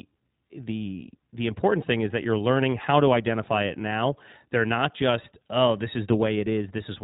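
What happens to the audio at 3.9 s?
At 3.9 s you're hearing the iLBC codec, which runs the whole clip: speech squeezed into a 4 kHz narrowband, each 20 ms frame coded alone, sounding plainly rough and synthetic, which fits roughly 15 kbps.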